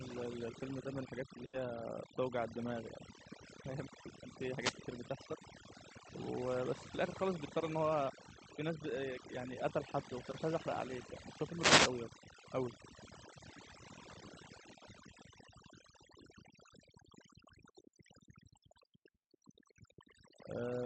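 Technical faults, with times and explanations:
Throughout, overdone noise removal: The denoiser is set far too hard. Any frequency band that drifts near its idea of the noise floor gets pulled right down or switched off, and the quieter parts of the speech get pulled down with it. The background sinks into near silence dotted with twinkly little specks. It sits on top of a call-codec sound that tops out around 8 kHz.
1.45–1.55 s, burst of packet loss: Roughly a tenth of a second of the stream didn't arrive in time. For about 80 ms the receiver keeps extending whatever it last had, fading it as it goes, so you hear a held buzz or a dying hiss rather than real speech. Then the audio picks up again further along, with another 80 ms of the original simply skipped over, so the flow jumps.
4.57–4.77 s and 11.54–11.95 s, wireless microphone noise hits: Two spots where the analogue FM radio link drops into a fade, most likely from reflections cancelling each other out. 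As the signal sags, receiver noise surges up, so each one lands as a swish of static. The first is short at about 0.2 s. The second is longer at about 0.4 s.
10.31–10.35 s, short concealed packet loss: A tiny hole, about 20 ms, that the decoder papered over by continuing the previous sound, following its pitch if voiced or as shaped noise otherwise, and then crossfading back into the real signal. What you catch is a quick smear or wobble. Another 20 ms of the actual audio is missing, so a brief consonant in that spot can just disappear.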